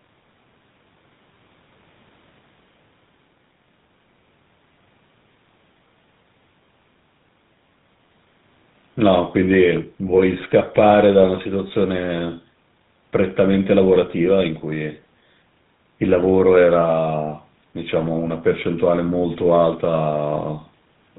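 Throughout, the speech carries GSM full-rate codec damage: nothing passes above 4 kHz, and a buzzy, gravelly roughness from the pulse-driven excitation, consistent with 13 kbps, sets it apart from plain band-limiting.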